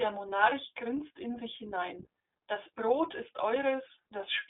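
Throughout, the sound is narrow and slightly rough and synthetic, with plainly audible coding damage and nothing outside roughly 300 Hz to 3.6 kHz. This is the iLBC codec, which codes each frame's excitation independently. The character fits its 15.2 kbps, 20 ms frame mode.

From about 0.50 to 0.53 s, just before "grinst in sich hinein", and again from about 3.12 to 3.16 s, a brief held, faintly buzzy vowel replaces the sound. These are lost iLBC frames, each consistent with one missing 20 ms frame, concealed by repeating the last pitch cycle mixed with noise.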